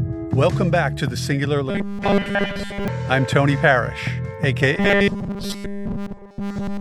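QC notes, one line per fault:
1.70–2.88 s and 4.75 s to the end, robotic sound from repeated short buffers: a rigid 200 Hz metallic buzz over most of the first stretch and all of the second, likely from a 5 ms chunk replayed while fresh audio arrives too slowly.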